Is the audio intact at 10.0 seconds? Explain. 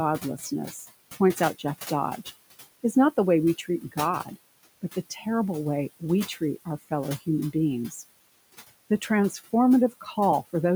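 No. From 9.91 to 10.16 s there is speech cut by the noise suppressor. It mistook part of the speech for background noise and pulled it down with the noise, by up to about 10 dB. Roughly a tenth of a second is affected. That part sounds swallowed and faint. Noise suppressor artifacts also run through this moment. The suppressor lowers the room noise by about 18 dB in bands it judges steady, frame by frame. The noise sinks between the words and rises under them.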